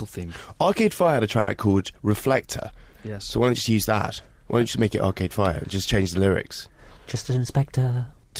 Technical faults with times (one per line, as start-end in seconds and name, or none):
1.39-1.49 short stall from a late packet
7.15-7.93 jitter buffer speed-up